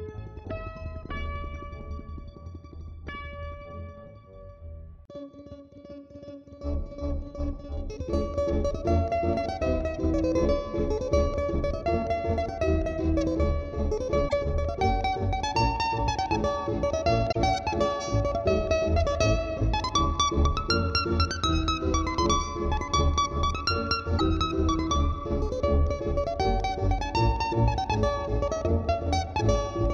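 Damaged data in the compressed stream causes brief glitches at 14.25–14.33, 17.28–17.36 and 24.15–24.21 seconds. The corrupted frames throw the decoder out of sync each time.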